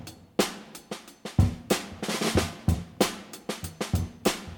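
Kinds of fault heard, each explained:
No technical faults can be heard in this clip. Nothing in the audio calls for a fault explanation here.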